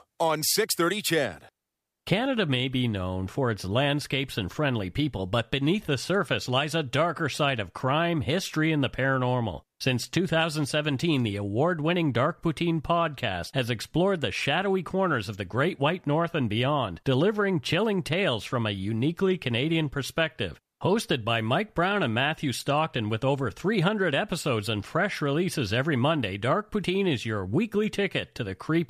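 No technical faults can be heard anywhere in this speech recording; the signal stays steady and intact throughout.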